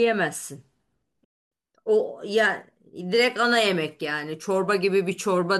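Speech, with a digital broadcast dropout from 1.24 to 1.52 s. The receiver muted on bad frames, fading out in about 8 ms, consistent with a run of lost frames. Unlike concealment glitches, nothing is smeared or repeated: there is clean silence, and the missing speech never returns.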